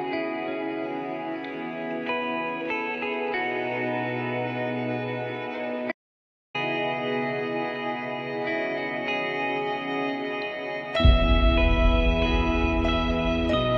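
At 5.92 s the sound cuts out mid-flow and comes back at 6.55 s, leaving about 0.63 s of dead silence with no room tone at all. That's an audio dropout to silence, likely the input getting lost while recording carried on.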